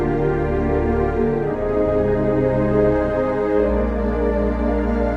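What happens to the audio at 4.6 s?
Nothing goes wrong at 4.6 s; the audio passes through intact, carried by the call path's Opus coding with its normal band limit near 12 kHz.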